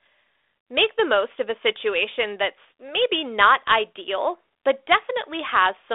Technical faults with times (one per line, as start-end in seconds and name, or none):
none